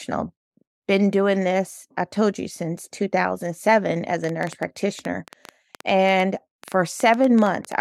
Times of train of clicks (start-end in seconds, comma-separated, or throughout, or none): 4.24-7.73